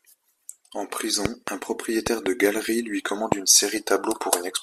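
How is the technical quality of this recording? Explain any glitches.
The recording is marred by loud pops. A sharp double pop lands at 1.25–1.50 s, another double pop at 2.07–2.28 s just before "galerie lui commande une", and a single pop at 3.32–3.34 s right after "galerie lui commande". Each jumps roughly 15 to 20 dB above the speech, which continues underneath. They are likely caused by a brief voltage spike from a connector, switch, static discharge or driver glitch entering the signal chain.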